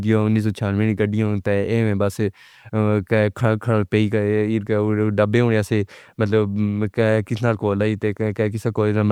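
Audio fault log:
Nothing to log here, as this speech clip comes through without any audible fault to note.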